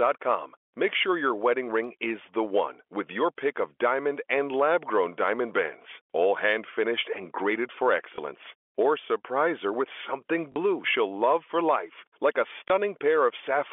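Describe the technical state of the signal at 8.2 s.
A brief blip at 8.16 to 8.18 s, right after "finished and graded for". This is packet loss with the last packet repeated: about 20 ms was lost and refilled with the previous chunk.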